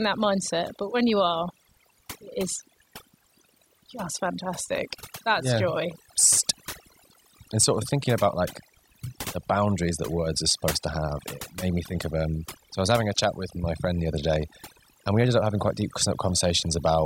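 Overdone noise removal runs through the whole speech clip. A noise reduction stage was pushed too hard. It treats any frequency band sitting close to its noise estimate as noise, and cuts that band deep or mutes it. Quiet parts of the voice fall under that threshold and vanish with the noise. Between phrases the background drops and breaks up into twinkling, warbling specks.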